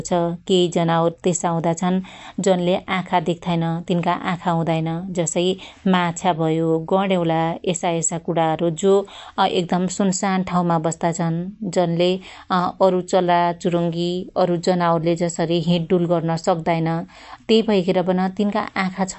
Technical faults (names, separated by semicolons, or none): MP3 compression